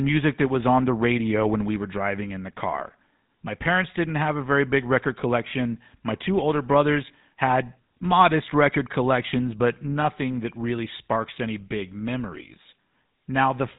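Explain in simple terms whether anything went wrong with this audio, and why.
The speech has gone through the GSM full-rate codec, the early mobile-phone coder. It rebuilds the voice from a simple vocal-tract model driven by spaced pulses and drops everything above 4 kHz, so the whole clip sounds plainly muffled, buzzy and gravelly.

There are also lost GSM frames between 10.02 and 10.07 s. About 20 ms of audio went missing, which fits one lost frame. The decoder filled the gap by repeating the last good settings, so that moment carries a short, rough, metallic ring.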